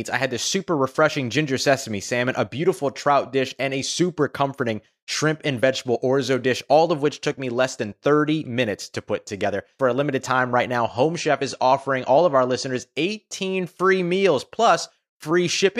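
From 10.81 s to 12.81 s the speech drops to a lower-quality version of the stream. This is an adaptive stream at a lower bitrate. The connection likely slowed, so the player switched to a cheaper encoding. The sound fits a change from about 128 kbit/s MP3 to about 48 kbit/s. In that stretch codec artefacts rise. Nothing is left above 11.3 kHz, so the treble is cut. The change is sudden, with no gap, and quality returns at 12.81 s.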